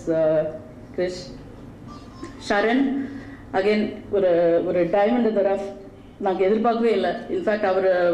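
No dropouts, glitches, distortion or level faults turn up anywhere in the recording.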